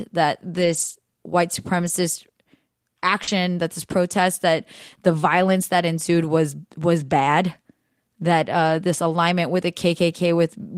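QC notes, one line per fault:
0.57–0.95 s, 1.79–1.89 s and 3.27–3.29 s, lost packet rebuilt from error correction: the audio never drops out, but these stretches turn rougher and noisier. The decoder was playing the low-bitrate copy that each following packet carried. On a spectrogram these spans go grainy while the waveform stays continuous. The 0.2 s first run fits about ten 20 ms packets.
3.23–3.29 s, short concealed packet loss: about 40 ms arrived too late and was filled by extending the preceding sound, then crossfaded back just before "that this protest that". It is heard as a brief smear or wobble. The spectrogram shows harmonics or noise copied flat across the hole with no new onsets. The waveform shows a smooth, slightly repetitive patch that blends into the real signal.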